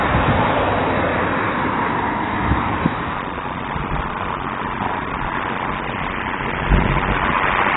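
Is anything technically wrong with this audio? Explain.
Yes, two faults. Throughout, the sound is dull and smeared with fizzy artefacts and nothing above 3.9 kHz, likely from heavy AAC compression at a very low bitrate around 16 kbps.

From 3.12 s to the end, a block size mismatch (padded) zero-fills each short block, causing a 93.8 Hz buzz and slowing playback to 0.625x at unchanged pitch, consistent with 512-sample reads.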